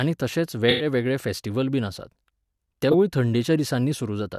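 Speech runs through this clip, and two bitstream faults interrupt it. From 0.68 to 0.86 s there is a corrupt frame concealed: damaged AAC data was caught by the decoder, which covered the gap itself instead of playing garbage. The covered span is about 0.18 s long, a span that fits a handful of frames, just before "वेगळे फॅस्टिवल बीन आसात". On a waveform the envelope sags smoothly rather than cutting off. A spectrogram shows a faded or blurred band across all frequencies with no bright streaks. At 2.89 to 2.95 s a corrupt frame decoded disrupts the speech. There the corrupted frames were played as if valid, so misread gains and codes put energy at the wrong frequencies for roughly two frames' worth of audio, peaking around −10 dBFS. A spectrogram shows an isolated bright patch or smear that does not match the surrounding harmonics. The waveform has a brief, spiky burst.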